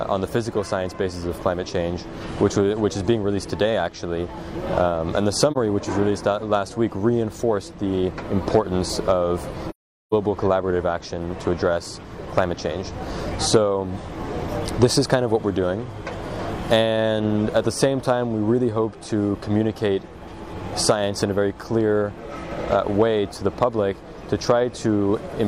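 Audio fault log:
5.52–5.57 s and 9.70–10.13 s, AAC frame loss with muting: the decoder filled missing frames with silence. The first gap, about 43 ms, fits one lost frame; the second, about 0.43 s, points to roughly ten in a row. Overlapping windows taper each edge, so the sound fades out and back in. The spectrogram shows a vertical blank band across all frequencies with soft edges, and the waveform narrows smoothly to zero and then swells back.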